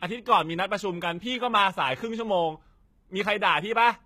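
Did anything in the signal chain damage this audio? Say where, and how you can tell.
Yes, and the damage sits at the codec stage and runs through the whole speech clip. The upper band is bright but synthetic: sibilants come out gritty and lispy with a metallic edge, and high harmonics don't line up with the lower spectrum. This is likely HE-AAC compression, where only the lower spectrum is coded and the treble is rebuilt by copying lower bands upward under a coarse envelope. The plainly audible damage fits a low bitrate of around 20 kbps.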